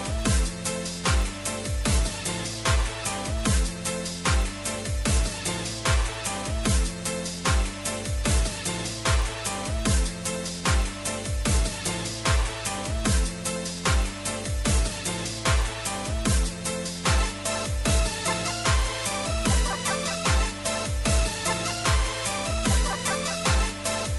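From start to end, the audio carries a buzz at 50 Hz. It comes from a resampler restarted on every block. The conversion from 24 kHz to 48 kHz was done in 20 ms pieces, each treated as if nothing came before or after. At every block edge the filter lacked its true neighbouring samples. That leaves a small error fifty times a second. The ticks merge into a steady buzz that sits under the sound and is present only while there is signal.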